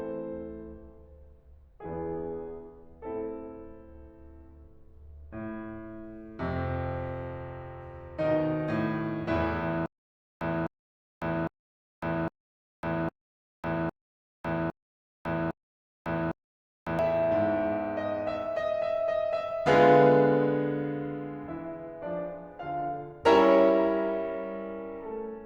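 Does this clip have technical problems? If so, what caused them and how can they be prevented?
Yes. From 9.86 to 16.99 s the music has a stutter with silent gaps: the same 256 ms fragment plays eight times, each followed by 551 ms of digital silence, on a steady 807 ms cycle. Plain dropouts would leave only gaps, but here the identical burst keeps returning. The likely cause is a stalled stream replaying its last buffer on each retry. Deeper buffering and a steadier connection would prevent it.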